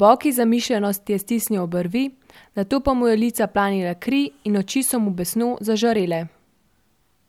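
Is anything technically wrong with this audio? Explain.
No, nothing technically wrong can be heard in this speech clip. There is no fault to explain.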